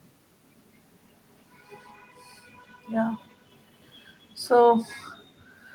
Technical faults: echo leak

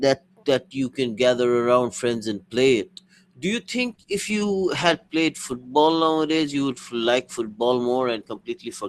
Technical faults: adaptive stream at a lower bitrate

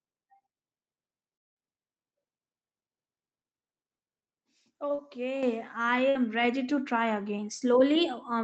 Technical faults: long network dropout; short concealed packet loss; microphone volume stepped up; burst of packet loss

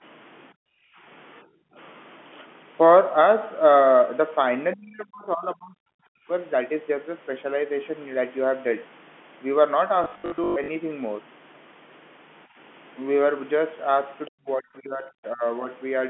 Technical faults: background gated by the echo canceller; speech suppressed in double talk; packet loss with last packet repeated; other side's voice leaking through

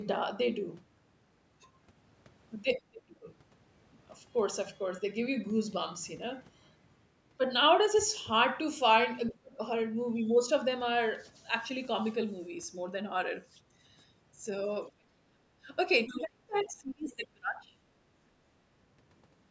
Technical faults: other side's voice leaking through; speech suppressed in double talk

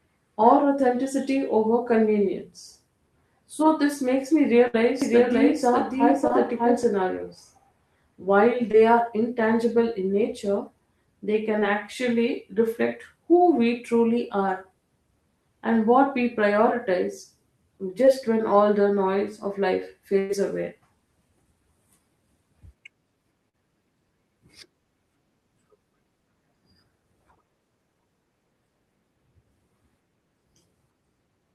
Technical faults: burst of packet loss; doubled audio track; short concealed packet loss

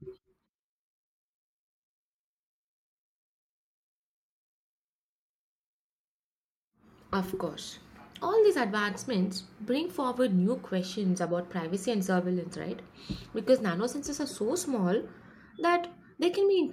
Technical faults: none

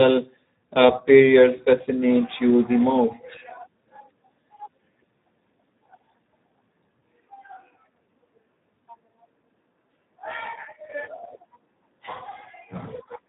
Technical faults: Speex codec

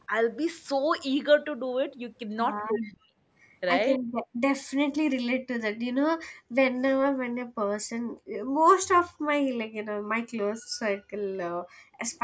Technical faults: echo leak; speech suppressed in double talk; background gated by the echo canceller

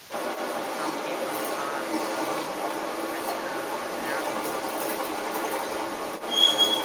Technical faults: other side's voice leaking through

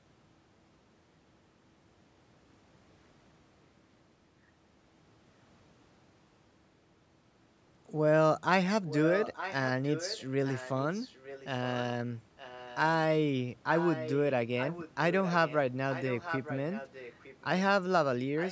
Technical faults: echo leak

